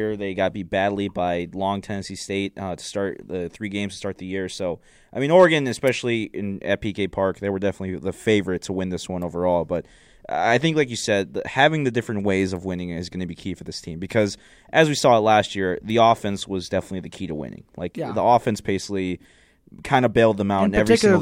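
No technical faults can be heard anywhere in the speech recording.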